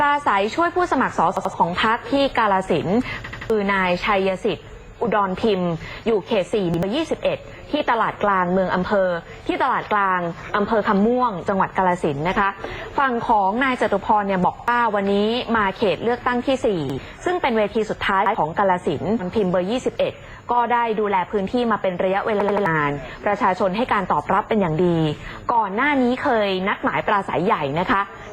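The audio suffers from repeated buffer stutters at seven points. Short pieces, about 85 ms each, play again with a hard join at every repeat. This fits a 4096-sample buffer. New audio arrived late, so the device replayed the last block. The longer stutters are at 1.37–1.54 s and at 3.24–3.50 s and 22.41–22.66 s, where the piece sounds three or four times. Single repeats occur at 6.74–6.83 s, 14.59–14.68 s, 16.90–16.98 s and 18.26–18.35 s. Each one pushes back or drops a small stretch of sound, up to about a third of a second. At 19.19–19.22 s the sound jumps abruptly forward with a small blip. The likely cause is a stream segment skipped: one segment of the stream failed to load, and the player went on with the next.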